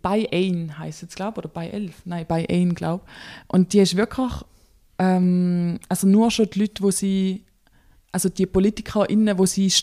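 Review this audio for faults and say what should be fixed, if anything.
Clock drift buffer slips, 0.43 to 9.44 s: regular clicks every 0.6 s, likely two free-running clocks roughly 300 ppm apart forcing small sample drops or repeats. Lock both devices to a shared word clock, or put asynchronous sample-rate conversion between them.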